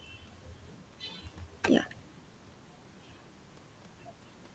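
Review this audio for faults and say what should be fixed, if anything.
Nothing here needs fixing.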